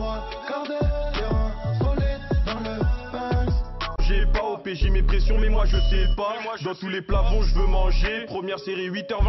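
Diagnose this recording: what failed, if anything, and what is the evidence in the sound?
Nothing failed; no stage leaves audible evidence of trouble.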